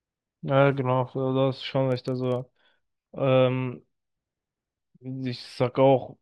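From about 1.92 to 2.97 s there's a filter restarted on every block. It's dropping its state at each block boundary and starting fresh from silence, so every block kicks off with a tiny transient. You hear it as a 25 Hz buzz riding under the speech, louder where the speech is louder.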